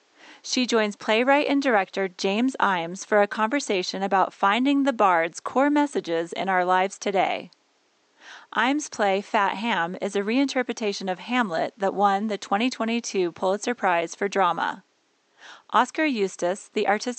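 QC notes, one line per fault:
Nothing to flag in this speech clip; the only thing in the background is the room's own noise, sitting about 43 dB below the speech.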